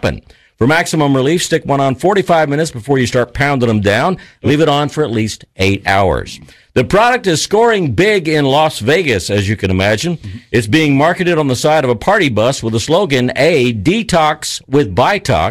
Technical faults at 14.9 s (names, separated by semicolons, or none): hard clipping